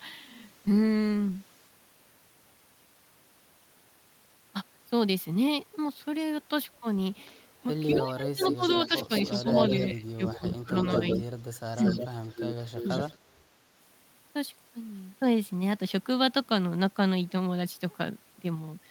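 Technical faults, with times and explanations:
7.25–7.42 s, 7.90–8.01 s, 8.40–10.38 s, 10.76–13.16 s: echo leak. A delayed copy of the sound follows the original by 212–221 ms. It is barely audible at first, about 35 dB down, then about 5 dB below the direct signal from 7.90 s on, sustained through the longer stretches. This is likely a loudspeaker-to-microphone path on the far end whose echo canceller failed to subtract the pickup, so the residue was transmitted back.
7.88–9.55 s, 9.88–11.19 s, 12.84–13.40 s: speech suppressed in double talk. While the echo is present, the direct speech is pulled down in pieces: around 20 dB at worst in the first span, around 15 dB in the second, and as much as 40 dB in the third. Each span loses somewhere under a second in total. The likely cause is an echo canceller that could not separate the local talker from the returning echo during simultaneous activity and attenuated both.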